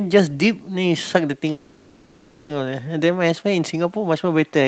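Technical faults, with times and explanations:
1.51 to 2.51 s: call audio freeze. The last sound is held as a buzzy, fading tone for 0.98 s, never reaching silence. Delayed packets likely emptied the jitter buffer. Then the audio resumes where it stopped, with nothing lost, but 0.98 s late.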